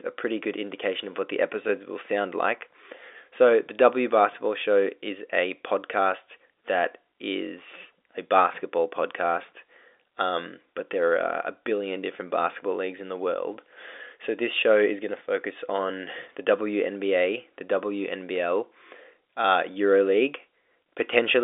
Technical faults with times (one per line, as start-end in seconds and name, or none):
none